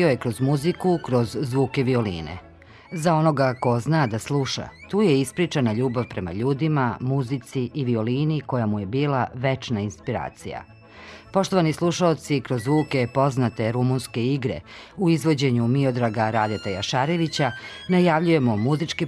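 From 6.59 s to 11.08 s, a de-emphasis filter has been applied wrongly: a treble cut meant to reverse pre-emphasis was run on audio that never had that boost, or ran a second time. The response falls away smoothly above the midrange, sitting about 11 dB lower at 10 kHz than at 1 kHz. Over that stretch the sound turns dull and muffled, losing its air and crispness, until the section ends.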